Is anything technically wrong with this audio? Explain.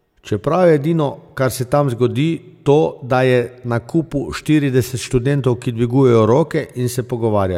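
No, nothing technically wrong can be heard in this speech recording at any point.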